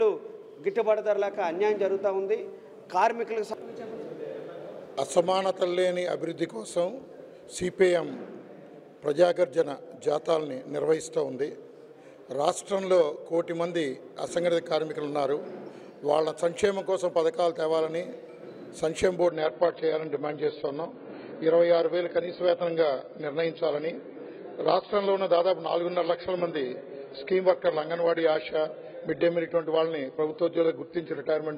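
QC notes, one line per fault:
19.29 to 31.58 s, adaptive stream at a lower bitrate: the sound abruptly turns dull and smeared with no gap or dropout, everything above about 5.1 kHz vanishes, and swirly, watery codec artefacts rise and stay to the end. The player has switched mid-stream to a much leaner version of the same AAC encode, which fits a drop from roughly 96 kbit/s to about 16 kbit/s, so the encoder discards the treble and quantises what remains coarsely.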